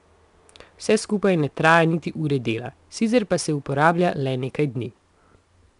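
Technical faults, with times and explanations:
Throughout, 4-bit ADPCM compression: a plainly audible gritty hiss rides on the speech and swells and fades with its loudness, because each sample is coded as a coarse 4-bit step from a prediction, so the error scales with the signal. Nothing sounds above 10.6 kHz, which fits a reduced sample rate and a stream of around 89 kbps. Unlike a perceptual codec, there is no swirling or warbling, only level-following grit.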